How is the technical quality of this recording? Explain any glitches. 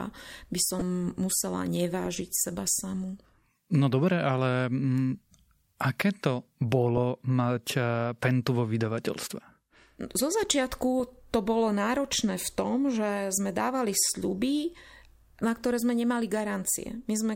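Two brief glitches come from a corrupt frame decoded. The first runs from 0.79 to 0.82 s. It peaks at around -15 dBFS across a couple of frames. The second hits at 2.05 s, just before "seba samu", near -20 dBFS over a few frames. In each case, damaged bits reached the decoder, which played them anyway. Misread codes and gains put energy at wrong frequencies. Each one sounds like a short chirp, squeak, blip or burst of noise over the speech.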